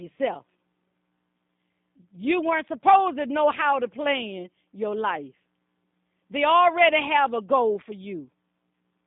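Speech heard through the G.729 codec across its whole length: the spectrogram shows a hard ceiling near 3.7 kHz and little below 150 Hz, and the rebuilt, slightly rough, synthetic texture is plainly audible, consistent with an 8 kbit/s pulse-coded VoIP link.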